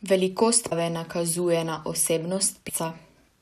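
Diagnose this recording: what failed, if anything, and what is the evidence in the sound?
Codec stage: damaged data in a compressed stream. Glitches at 0.69–0.72 s, before "nakazuje na", and 2.65–2.71 s. Corrupt frames broke decoder sync.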